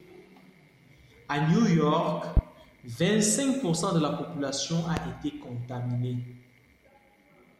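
At 2.37 to 2.41 s and again at 4.97 to 5.01 s, a loud pop cuts through the speech, each a single sharp thump roughly 15 dB above the surrounding level while the talking continues beneath it. A sudden voltage jolt, likely from a plug, switch, static or driver glitch, was added to the signal. The waveform shows a tall isolated spike at each point, and the spectrogram shows a thin bright vertical stripe spanning all frequencies.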